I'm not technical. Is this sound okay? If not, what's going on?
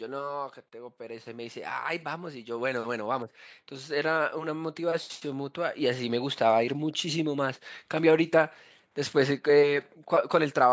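No. Automatic gain rising, from about 0.97 to 7.3 seconds: the call's volume control decided the speech was too quiet and slowly turned it up, so the voice and the background noise swell louder together over those six seconds.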